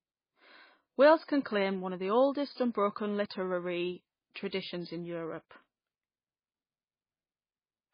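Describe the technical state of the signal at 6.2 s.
At 6.2 s the speech sounds watery and swirly, with nothing above about 5.1 kHz, so s sounds lose their hiss and turn to metallic chirps, and consonant onsets smear. This runs through the whole clip. It is most likely MP3 compression at a very low bitrate, consistent with roughly 16 kbps. Starved of bits, the encoder cut the treble at a fixed point and dropped weak frequency components, which flicker on and off from frame to frame.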